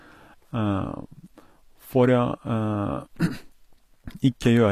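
HE-AAC compression runs through the whole clip: the treble stops dead at 14.9 kHz, and the s sounds come out gritty and metallic. The likely cause is spectral band replication, which copies lower bands upward instead of coding the real highs, consistent with a low bitrate around 24 kbps.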